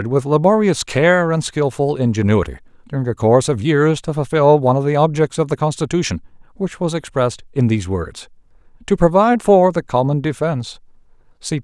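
No dropouts, clipping, glitches or other technical faults turn up anywhere in the recording.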